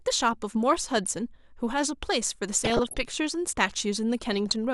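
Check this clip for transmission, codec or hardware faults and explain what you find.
Yes, there are codec faults. DAB burbling hits three times: 0.80 to 1.17 s, 2.55 to 2.95 s and 4.33 to 4.52 s. Bit errors of well under one percent slip past error correction and corrupt MP2 samples and scale factors; wrong samples give short blips of noise, and wrong scale factors make individual sub-bands jump for up to a frame. The result is short blips of noise and level jumps in single sub-bands. On a spectrogram it shows as flickering rectangular band blocks.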